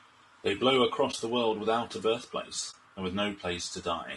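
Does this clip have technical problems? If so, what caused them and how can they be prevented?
Yes. The speech throughout sounds rough and grainy, with noise filling the gaps between harmonics and a thin, synthetic top band. This is likely low-delay AAC compression (AAC-ELD) at a bitrate that sounds near 32 kbps. Its short frames resolve pitch harmonics poorly. A spectrogram shows smeared, noisy harmonics and patchy upper bands. Raising the bitrate, or using a longer-frame codec where delay allows, would prevent it.

There is AAC frame loss with muting at 1.11 to 1.15 s and at 2.71 to 2.74 s. Each dip fits a single lost frame of about 20 ms whose spectrum the decoder zeroed. Overlapping windows fade the sound out and back in. The waveform shows a brief soft-edged hollow, and the spectrogram shows a narrow vertical gap. Using error-resilient transport with retransmission or redundancy would prevent these.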